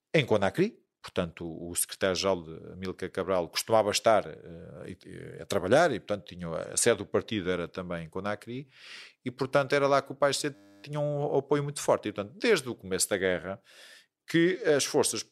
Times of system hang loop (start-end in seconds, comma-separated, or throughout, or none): 10.55-10.84